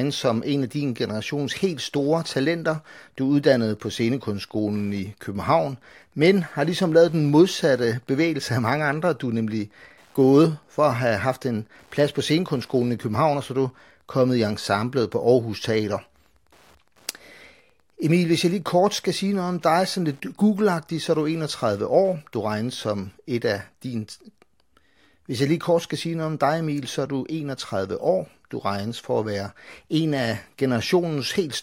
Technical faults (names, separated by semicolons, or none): Wi-Fi interference